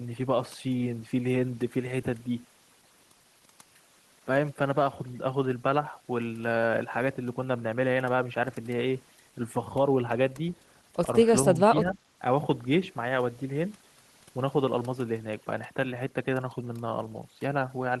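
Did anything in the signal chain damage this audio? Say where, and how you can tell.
Yes. In call processing, overdone noise removal runs through the whole clip. The suppressor was set too hard, cutting single frequency bands whenever they sat near its noise estimate. The background drops and breaks up into twinkling specks, and quieter speech detail vanishes.

Between 11.54 and 11.98 s the speech dips by roughly 15 dB, affecting about 150 ms in total. This is likely speech suppressed in double talk: the echo canceller couldn't separate the local talker from loudspeaker echo, so it turned both down.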